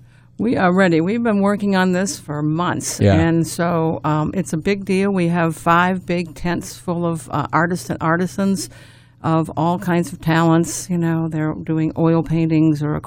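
No technical faults are audible anywhere in this audio.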